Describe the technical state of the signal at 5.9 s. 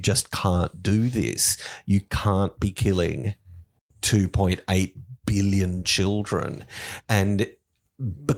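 At 5.9 s the speech signal is intact, with no audible fault at that moment.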